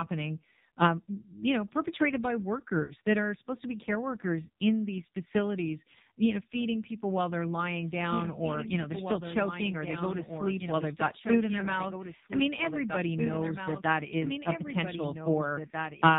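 From start to finish the speech sounds buzzy, thin and synthetic, with nothing above 4 kHz and a hollow, robotic edge on the voiced sounds. This is the AMR narrowband mobile codec, heavily damaged at 5.9 kbps. At that low rate the vocal-tract model gets only a few excitation pulses per subframe, so the voice comes out as a coarse, buzzy approximation of itself.

At 2.84 to 2.93 s, just after "you know perpetrated by" and before "that are supposed to", the voice briefly smears into a drawn-out warble and sags in level, then returns slightly rough. These are lost AMR speech frames. Radio errors corrupted about 60 ms of data, which fits three 20 ms frames. The decoder covered the gap by repeating its last good pitch and vocal-tract settings while lowering the gain.

From 7.65 s, right after "feeding people while they're", a second copy of the same audio cuts in abruptly and continues to the end. 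It trails by roughly two seconds and sits about 5 dB below the original, with no reverberant tail or added room colour. This is a doubled audio track. The most likely cause is the signal being captured a second time through a slower path and mixed back in.

At 11.60 to 11.66 s a single 20 ms lost AMR frame produces a brief dip or warble.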